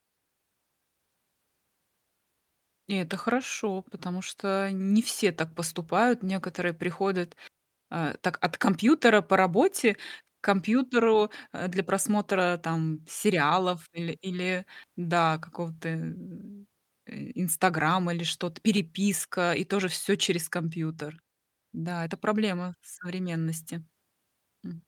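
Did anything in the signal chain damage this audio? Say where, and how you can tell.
No, nothing along the chain seems to have left a mark on this speech recording, so there's no stage to point to and nothing to trace back.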